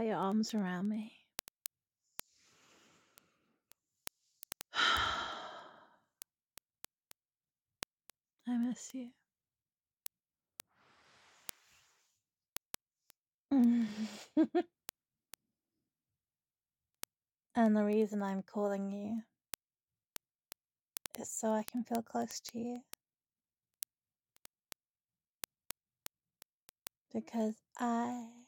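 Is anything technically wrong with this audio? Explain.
Yes. From 0.14 s to the end at 28.48 s there are word clock ticks. The receiving device is reading a digital link on its own clock, not locked to the sender's, and the two run apart by a couple of hundred parts per million. Each time they slip past each other, one sample is dropped or repeated and its neighbours are misread. This produces a steady stream of sharp ticks, about ten per second, of uneven strength.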